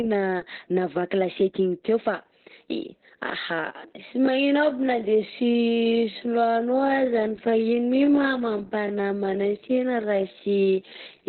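From the start, the whole speech clip carries heavy Opus voice compression. Nothing sounds above about 4.2 kHz, and the voice is muffled, hoarse and faintly robotic, which points to SILK narrowband coding at a very low bitrate, around 8 kbps. The coarse excitation separates it from a simple low-pass filter.

At 3.55 s the pace abruptly drops to about 0.61 times normal speed and stays there to the end, while the pitch does not fall. This is likely a time-stretched section, where short pieces are repeated to lengthen the audio, so the speech drags. Slowed playback would have lowered the pitch as well.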